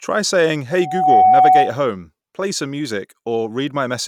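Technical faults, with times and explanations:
0.71–1.77 s, loudspeaker feedback squeal: the microphone re-amplified its own loudspeaker output, so a 747 Hz tone builds over roughly 0.4 s to about 10 dB above the speech, cutting off before "play some".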